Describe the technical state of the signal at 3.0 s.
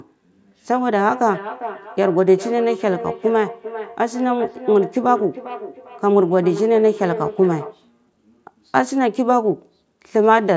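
Feedback echo between two devices runs from 0.84 to 7.9 s: a second device replays the sound into this microphone, returning it roughly every 0.4 s, peaking about 12 dB below the speech.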